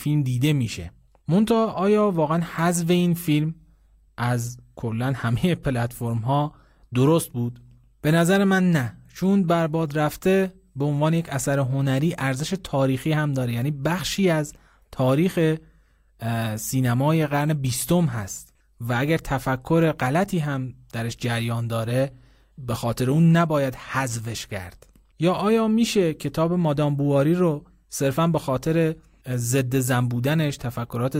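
No technical faults can be heard in this recording.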